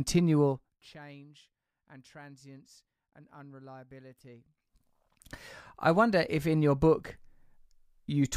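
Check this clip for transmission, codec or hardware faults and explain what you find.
One fault is present. From 0.46 to 0.90 s, zipper noise: a roughly 25 dB level drop applied in unsmoothed steps, around a hundred per second, adds a fine ticking over the speech.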